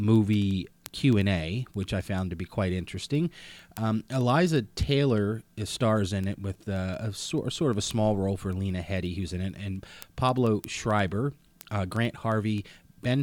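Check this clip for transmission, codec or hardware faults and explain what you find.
One hardware fault runs through the speech. Word clock ticks, 0.16 s to 13.20 s: an unlocked receiver slips one sample about every 0.1 s, causing sharp, uneven ticks that appear as thin vertical spectrogram lines.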